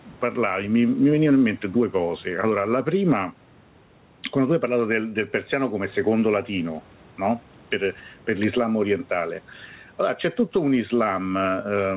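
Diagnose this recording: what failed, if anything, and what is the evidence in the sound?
Gain pumping runs through the whole recording. The gain ducks by around 10 dB under every loud sound. The likely cause is input gain set far too high, with a fast limiter or compressor in the capture or call-processing stage clamping each peak. On the waveform the envelope looks flattened and squashed. On the spectrogram the band stops at 4 kHz.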